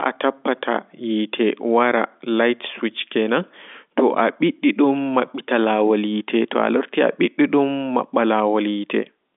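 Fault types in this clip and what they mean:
Nothing in this speech stood out as a fault on listening.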